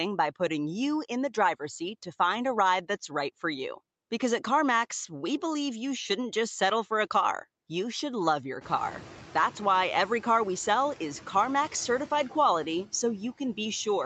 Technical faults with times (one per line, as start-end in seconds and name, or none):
8.61-9.63 noise suppressor catching up